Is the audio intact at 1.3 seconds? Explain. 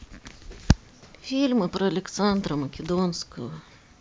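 Yes, the audio is intact at 1.3 seconds, with no fault present at that moment.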